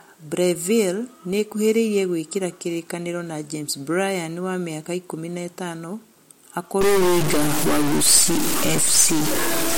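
From 6.81 s to the end, a stuck bit, likely from a broken data line or converter, holds one bit fixed, throwing roughly half the samples off by its weight. The speech is degraded, and pauses fill with noise.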